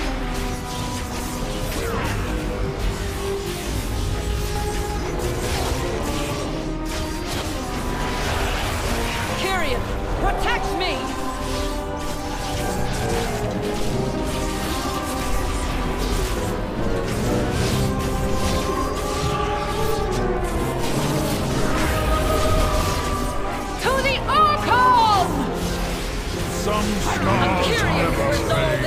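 The audio has a channel delay causing comb filtering from 2.13 to 4.56 s. In that stretch the sound turns rough and slightly doubled. One channel arrives late by around 20 ms before the two are folded to mono. Content shared by both channels then cancels at a row of evenly spaced frequencies. The first notch falls near 30 Hz, and the rest repeat upward at fixed steps. This carves a dense comb of dips into the spectrum.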